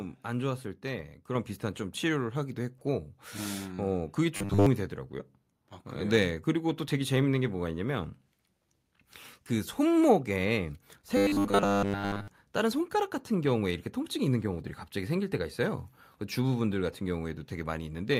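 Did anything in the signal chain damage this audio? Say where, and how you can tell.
Yes. At 1.35 s the level of the whole signal, voice and background together, jumps up by about 5 dB in a single step and stays there. That points to the call-processing stage: automatic gain control judged the microphone too quiet and raised the device's input volume at once. Because the change is applied before any speech processing, speaker and room noise rise by the same amount at the same moment.

From 4.37 to 4.67 s, and again from 11.17 to 12.28 s, the sound turns into a rigid, metallic buzz at 100 Hz. The likely cause is the driver or buffer stage starving for input and filling the gaps by replaying the last short block of audio while the real signal is skipped. A 100 Hz repetition fits a block of about 10 ms. Most of the first span is made of repeats, and essentially all of the second.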